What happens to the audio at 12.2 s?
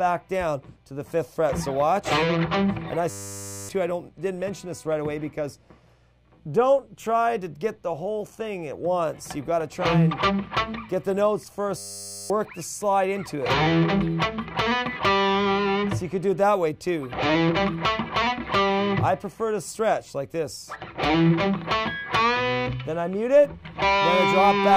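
At 12.2 s you're inside a system hang loop, running from 11.78 to 12.3 s. The machine stalled while the sound hardware kept replaying the same 10 ms slice of its buffer, 52 times over, so you hear a steady 100 Hz buzz and lose roughly half a second of audio.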